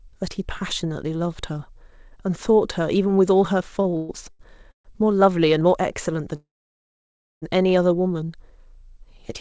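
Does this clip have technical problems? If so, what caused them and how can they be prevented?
Yes. The clip is speech carried over a call path with nothing above 8 kHz, which fits a wideband codec such as G.722 at 64 kbps, and it has three faults.

Repeated stalls (stutter) occur from 3.82 to 4.92 s. Packets arrived late in five bursts, so the jitter buffer emptied repeatedly and the receiver stretched the last sound to fill the holes. That adds about 386 ms in total, with the longest gap at 131 ms, and nothing is lost. Steadier network delivery or a slightly deeper jitter buffer would prevent this.

A call audio freeze runs from 6.35 to 7.44 s. The sound halts for about 1.06 s, nearly all of it (about 0.97 s) silent, then resumes exactly where it stopped, so nothing is missing. The likely cause is packets held up in transit until the buffer drained completely. Prioritising the call traffic with QoS on congested links would prevent it.

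A jitter buffer slow-down affects 7.96 to 8.26 s. The receiver repeated single pitch periods to rebuild its reserve, so the speech plays at about 88% speed with unchanged pitch and adds 41 ms. Reducing network jitter lowers how often the buffer needs to rebuild its reserve this way.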